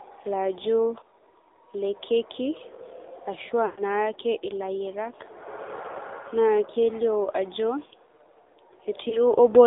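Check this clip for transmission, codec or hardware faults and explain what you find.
There are two problems, both from the mobile path. The whole clip has gone through the AMR narrowband mobile codec, and there are two spots where AMR speech frames were lost.

The AMR narrowband coding runs the whole way through. The band sits between roughly 300 Hz and 3.7 kHz, and nothing above 4 kHz survives. At this low rate, which points to AMR-NB's 7.4 kbps mode, the vocal-tract model with sparse pulses makes the speech plainly buzzy and synthetic.

The lost AMR speech frames show up at 3.66 to 3.82 s, about 120 ms of damage, which fits six dropped 20 ms frames. The decoder keeps repeating the last good pitch and filter settings with falling gain, so the sound smears and fades before recovering roughly. A single frame goes at 9.10 to 9.18 s, and you hear it as a short dip or warble.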